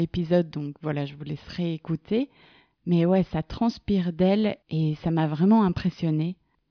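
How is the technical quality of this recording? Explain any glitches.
Nothing in this speech recording jumps out as a glitch, so there's really nothing to explain here.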